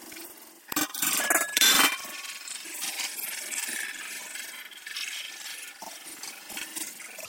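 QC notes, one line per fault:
Throughout, planar audio read as interleaved: each 85 ms block, which fits a 4096-sample block size, plays twice at double speed, left half then right half, so the sound sits an octave high with an 11.7 Hz flutter while overall pace stays normal.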